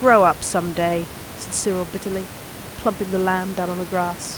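Speech with no technical faults.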